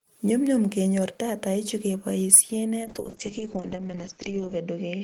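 Between 2.33 and 2.36 s the loudest moment of the speech turns harsh and crackly, its peaks flattened rather than rounded. A sizeable share of the samples in that stretch, roughly one in seven, was pinned at the converter's limit. This is microphone overload. The likely cause is an input level set so high that the signal tried to go about 6 dB past the converter's maximum, so the tops of the waveform were simply sliced off.

At 2.35 s, right inside that distorted burst, the voice and the background behind it both drop in loudness by about 3 dB in a single step. There is no gradual fade. This is the microphone volume stepped down. It is likely an automatic gain control in the call software reacting to the clipping it had just detected and pulling the device's input level down in one move.

From 2.84 s to the end, the speech loses its air and crispness. It becomes muffled and rough. The audible bandwidth narrows from about 20 kHz to roughly 8 kHz, and the coarsest stretch lasts about 1.7 s. 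This is a call bitrate drop. The sound points to the encoder being told to spend far fewer bits, around 8 kbps instead of about 32 kbps. It codes more crudely as a result and discards the upper frequencies to save data.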